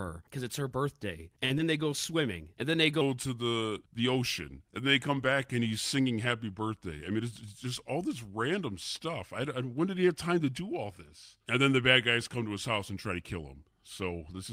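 It's a speech recording with a handful of network and playback problems stacked up. Right near the start, from 1.45 to 1.52 s, there's a short stall from a late packet. The jitter buffer ran dry, so the receiver stretched the last sound for 46 ms until the packet showed up and then carried on from the same point. Nothing is lost, but that sound hangs a touch too long with a slight buzz or dip. Just after, from 1.58 to 1.61 s, comes a short concealed packet loss. About 20 ms of audio never made it, and the receiver papered over the gap by extending what came before, then blended back in. It's heard as a quick smear or wobble. From 3.01 s through to the end, the audio runs as a section at the wrong speed, playing at 0.863 times normal, so everything drops roughly three semitones and drags noticeably slower and deeper. The likely cause is the audio being played or resampled against the wrong clock rate. 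Inside that stretch, from 6.91 to 7.66 s, there's a jitter buffer speed-up. The buffer had piled up more audio than it wanted, so it trimmed out tiny pitch-period slices, around 50 ms in total, running at 105% speed. The pitch stays put, but that bit sounds slightly rushed.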